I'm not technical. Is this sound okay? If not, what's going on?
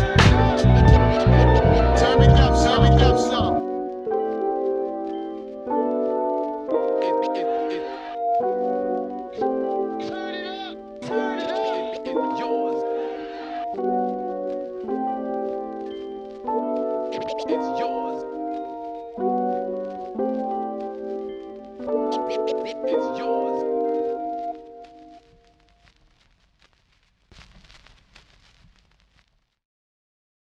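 No. There is a doubled audio track from the very start until about 3.6 seconds. The same sound plays twice, with a second copy trailing roughly seven-tenths of a second behind and about as loud as the first. It is not an echo: the copy is just as clear and doesn't fade. This is likely the audio being captured a second time through a slower route, or an edit holding two copies out of step. At 3.6 seconds the copy cuts off abruptly.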